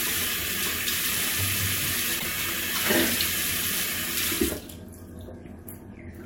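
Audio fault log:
2.18–2.26 s, broken MP3 bit reservoir: the audio skips forward, and for about 80 ms, roughly three 26.1 ms frames, it comes out corrupted before playback settles. The likely cause is missing frames, leaving the following frames to borrow reservoir bytes that now belong to other frames. Unlike a plain dropout, the material after it resumes further ahead in time.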